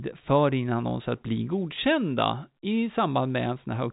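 No technical faults can be heard in this speech clip. It has the sound of a telephone line, with nothing above 4 kHz and at most a faint hiss that rises and falls with the level, which fits ordinary G.711 A-law telephone coding.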